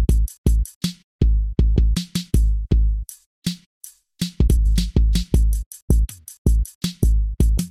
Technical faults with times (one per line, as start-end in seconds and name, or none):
4.48-4.66 frames out of order